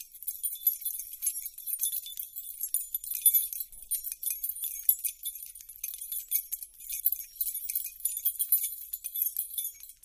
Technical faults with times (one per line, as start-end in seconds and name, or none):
0.80-1.60 chunks out of order
6.80-7.20 chunks out of order